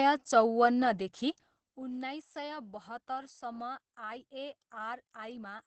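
Right from the start and all the way through, this speech has the sound of Opus voice compression. Nothing comes through above about 8.8 kHz, so the top end is shaved off and the voice feels muffled. The coarse, slightly hoarse and robotic edge points to the SILK linear-prediction coder in wideband mode, running at a low rate, which fits something like 12 kbps. The damage is plainly audible.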